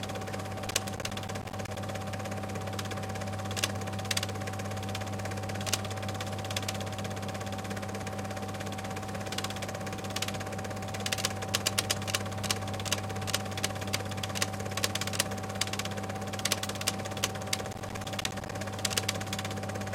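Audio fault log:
0.67–1.77 s and 17.65–18.52 s: processor overload crackle; in each burst around twenty buffers of roughly 10 ms miss their deadline, leaving hard-edged silent gaps heard as crackle.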